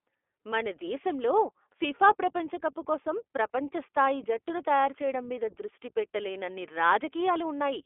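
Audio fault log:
throughout, iLBC codec: the speech is squeezed into a telephone band of 300 Hz to 3.4 kHz and coded in 20 ms frames, each rebuilt without help from the last, leaving a plainly audible rough, synthetic edge that fits iLBC's 15.2 kbps mode.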